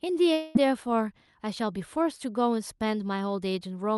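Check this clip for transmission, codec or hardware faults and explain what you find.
One transmission fault is audible in this speech. From 0.33 to 0.57 s the sound turns into a fading buzz, likely a long network dropout. About 220 ms never arrived, and the receiver filled the gap by extending the last sound before the speech resumed further on. The call path's Opus coding limits the top end to about 12 kHz.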